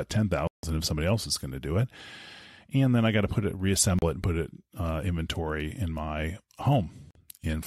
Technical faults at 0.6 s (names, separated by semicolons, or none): Bluetooth stall